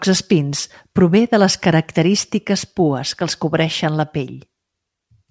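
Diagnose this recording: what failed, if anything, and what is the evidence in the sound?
Aliasing from sample-rate conversion throughout: sibilants turn gritty and metallic as content above 8 kHz folds back, about 20 dB down, fitting an unfiltered drop to 16 kHz.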